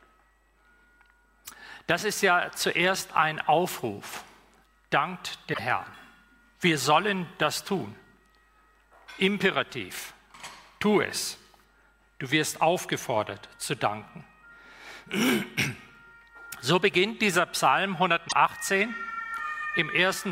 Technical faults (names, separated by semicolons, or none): broken MP3 bit reservoir